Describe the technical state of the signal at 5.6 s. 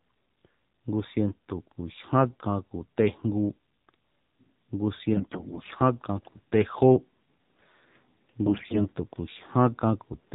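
AMR bit errors cover 5.14 to 5.75 s. Flipped low-priority bits misplace the excitation pulses and skew pitch, gain and spectral detail, so the speech keeps its pitch and level but turns hoarse, scratchy and gargly. This sits on top of the AMR narrowband mobile codec, which cuts everything above 4 kHz and gives a buzzy, synthetic timbre that fits a low bitrate mode around 7.4 kbps.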